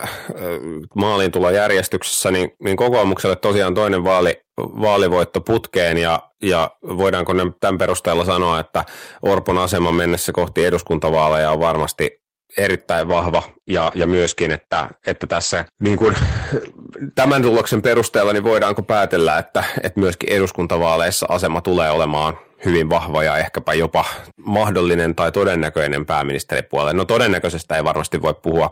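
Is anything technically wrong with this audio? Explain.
Yes, two problems. Throughout the speech there is a harsh, crackling fuzz on loud syllables. This is hard clipping: the signal is overdriven by about 10 dB, so a few percent of samples have their peaks sliced flat, adding high harmonics.

From 13.03 to 19.95 s the speech turns muffled and watery, then clears before "myöskin eduskuntavaaleissa asema tulee". This is a call bitrate drop from 64 to 12 kbps, narrowing bandwidth from 20 kHz to 8 kHz, bottoming out for about 3.35 s.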